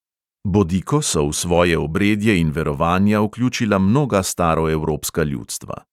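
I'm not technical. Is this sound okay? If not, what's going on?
Yes, nothing in this recording points to a technical problem: the signal stays steady and intact the whole way, with nothing breaking up, dropping out or distorting.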